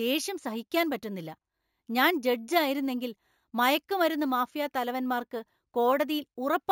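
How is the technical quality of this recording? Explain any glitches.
Quality is compromised by one fault running the whole way through. A bright metallic fizz rides along with the speech, tracking its loudness, about 18 dB below it. This is imaging from sample-and-hold upsampling: the audio appears to have been raised from 16 kHz to 48 kHz by repeating samples unfiltered, so mirrored spectra fill 8 to 16 kHz.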